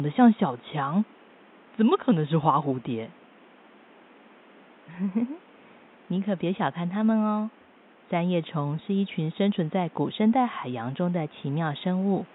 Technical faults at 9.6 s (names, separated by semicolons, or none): none